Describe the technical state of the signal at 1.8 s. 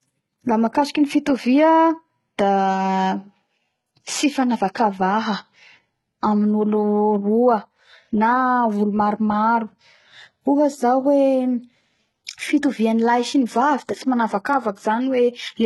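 At 1.8 s the speech shows heavy damage that points to HE-AAC compression at around 16 kbps, likely running throughout. Treble is rebuilt from copied lower bands and stops at 11.8 kHz. Sibilants sound gritty and metallic.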